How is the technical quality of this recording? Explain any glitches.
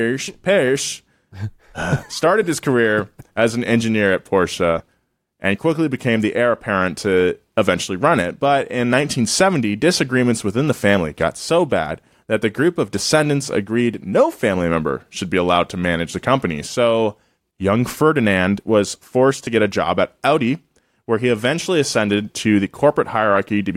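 The recording has two brief dropouts from lost LE Audio frames, at 4.78 s and 19.45 s, against light lossy compression whose codec damage is slight. At each point about 15 ms of audio went missing, which fits two 7.5 ms frames. The LC3 decoder filled the gap by repeating the last spectrum with random signs, so the sound briefly smears into a short noisy blip. On a spectrogram, the harmonics blur into a thin vertical band of noise. The waveform shows a small irregular patch.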